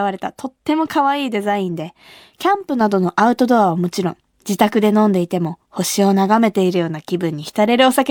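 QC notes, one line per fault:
2.81–8.11 s, sudden gain jump: at 2.81 s the speech and the background noise both step up by about 5 dB at once and stay there until the end. There's no ramp, so the likely cause is a gain change applied instantly in one step.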